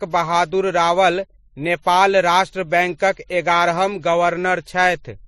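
Throughout the speech, two sets of compression artefacts are heard together, likely from transcoding between lossy codecs: a WMA-like smear under MP3-style warbling, which fits about 64 kbit/s followed by 41 kbit/s. A spectrogram shows nothing above 13 kHz and patchy, holed upper bands.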